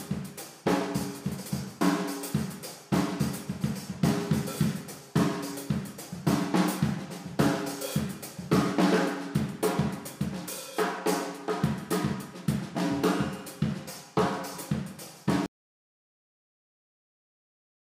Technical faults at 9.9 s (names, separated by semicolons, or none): none